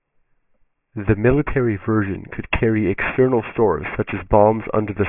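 Aliasing runs through the whole speech clip. The sound is band-limited with a hard ceiling at 3 kHz. Energy presses right up to that edge instead of rolling off. That points to a drop from a much higher rate to about 6 kHz with no filter first. Content above 3 kHz folds back down to false, unrelated pitches. Those folded tones sit around 15 dB below the speech. Sibilants turn gritty and metallic.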